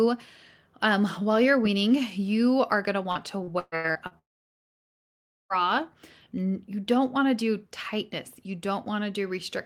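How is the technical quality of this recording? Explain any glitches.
The quality is poor through the middle of the clip, where two connection faults break the speech in close succession.

Right after "you are going to", from 3.11 to 4.14 s, the speech turns choppy and robotic, with six short holes, the longest 128 ms. This is repeated packet loss (robotic sound). Data kept failing to arrive, and each time the receiver extended the last bit of sound to cover the gap. About a third of this second is that stand-in sound, which gives it the robotic, broken texture.

Almost immediately after, from 4.19 to 5.53 s, the audio cuts out for about 1.3 s and is silent for nearly all of that stretch. When the speech returns, the missing portion is simply gone. This is most likely a long network dropout, where nothing reached the receiver for more than a second. Any attempt to fill the gap died out almost at once, leaving silence until the stream recovered.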